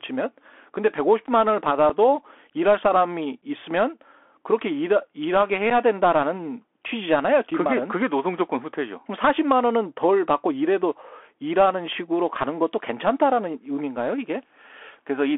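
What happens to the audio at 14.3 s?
At 14.3 s the speech carries the Bluetooth CVSD headset codec, which runs through the whole clip rather than starting there. The band sits at roughly 300 Hz to 3.4 kHz, and the one-bit, step-adapting coder leaves a granular hiss beneath the speech, smears loud high-frequency sounds, and makes s sounds scratchy. That slope-overload grit and hiss, consistent with a 64 kbps CVSD link, separates it from a plain telephone band-limit, which narrows the sound just as much but stays clean.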